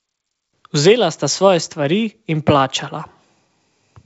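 Nothing stood out on listening to this speech, which reaches the ear through a G.722 wideband telephone path at 64 kbit/s with no content above about 7.7 kHz.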